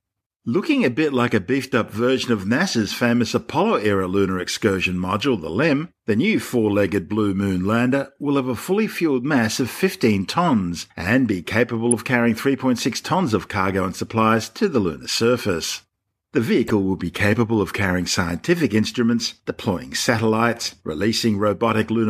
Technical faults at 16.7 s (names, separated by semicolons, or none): corrupt frame decoded